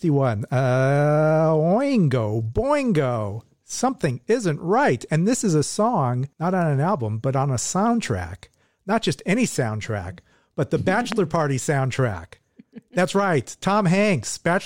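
At 11.12 s, just after "any soundtrack but the", a single loud pop cuts through the speech. It lasts until about 11.14 s. The pop stands roughly 15 dB above the speech level. It is a sharp, hard click with a little thump in it. The speech carries on underneath without a break. The likely cause is a sudden voltage step entering the signal path, from a plug, switch, static discharge or driver glitch.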